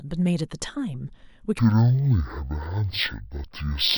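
From 1.59 s to the end, stereo is read as mono: the interleaved left and right samples are played one after another as a single channel. The speech slows to half speed and drops a full octave, with a faint mirror image in the upper spectrum.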